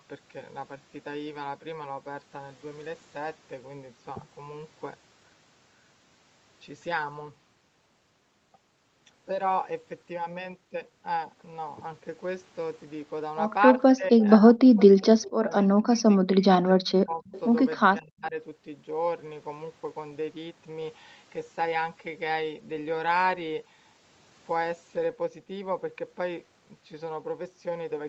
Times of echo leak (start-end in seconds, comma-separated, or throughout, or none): 13.78-13.82, 14.76-14.83, 15.24-15.31, 17.25-17.41